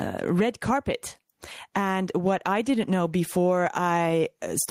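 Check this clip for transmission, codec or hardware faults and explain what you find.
Gain pumping runs throughout the speech. Input gain was likely set far too high, so a fast limiter clamps each loud syllable, ducking the gain by around 15 dB, then letting it swell back between phrases.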